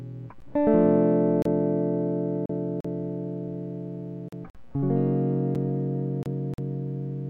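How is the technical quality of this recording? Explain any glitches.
The music is repeatedly broken by short, hard-edged dropouts of two kinds.

Gap between stream segments: brief holes of silence cut into the music at 1.42–1.45 s (32 ms), 2.46–2.50 s (37 ms), 4.50–4.55 s (48 ms), 5.55 s (5 ms) and 6.54–6.58 s (45 ms). They fall at roughly one-second spacing, which points to a stream cut into one-second segments whose timestamps don't meet. The player pads each mismatch with silence, so the music pauses and resumes without losing any material.

Block of digital silence: three further dropouts, at 2.81–2.85 s (40 ms), 4.29–4.33 s (40 ms) and 6.23–6.26 s (29 ms), cut to silence and back with no fade, so they land as sharp pops or short holes. Here a run of zeros was played, most plausibly because the output buffer wasn't filled in time.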